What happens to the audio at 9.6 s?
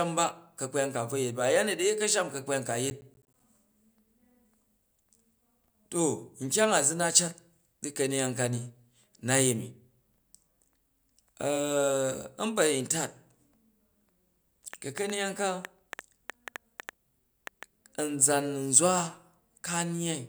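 Nothing goes wrong at 9.6 s; the speech carries on intact through that moment.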